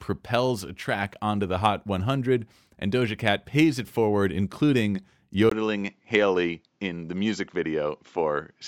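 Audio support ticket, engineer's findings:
Input switched to a poorer device at 5.50 s, after "pays it forward including", through end. 20 ms gap, then nothing above 7.6 kHz, added noise about 50 dB down, level steady. Spectrogram: hard 7.6 kHz ceiling; waveform: brief dropout. Likely mid-capture device change.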